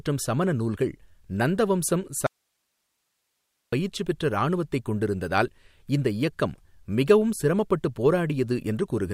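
A speech recording with an audio dropout to a faint residue from 2.27 s to 3.73 s: the signal cuts out abruptly for about 1.46 s, leaving only low hiss around 50 dB below the speech level, then snaps back. The likely cause is a brief loss of the source feeding a still-live input. On a waveform the envelope collapses to a thin noise band with square edges; a spectrogram shows the speech energy vanishing into a faint, even broadband haze.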